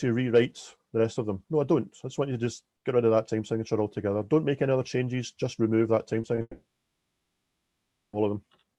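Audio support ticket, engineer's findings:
Brief smears/wobbles at 6.21–6.25 s and 6.35–6.39 s, each about 20 ms of missing audio. Short concealed packet loss: packets arrived too late for the decoder. Receiver's concealment extended the preceding sound, then blended back into real audio.

Buzz/hiss continuation from 6.41 s, fading out, followed by about 0.67 s of silence; audio resumes at 8.15 s with about 1.7 s gone. Long network dropout likely: no packets received, concealment decays to silence, and the lost stretch is skipped.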